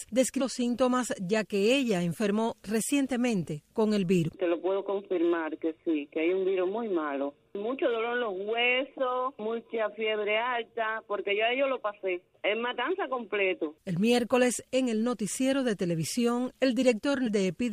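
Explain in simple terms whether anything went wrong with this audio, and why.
Compressed frames skipped, at 4.27 to 4.30 s: the audio jumps ahead by about a fifth of a second, roughly ten compressed frames that were never played, which fits 23.2 ms frames.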